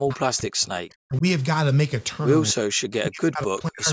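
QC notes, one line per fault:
0.00–1.24 s, 2.53–2.71 s, 3.05–3.93 s: speech suppressed in double talk, dropping roughly 40 dB, likely the echo canceller ducking overlapping talk; waveform collapses, spectrogram goes near-blank.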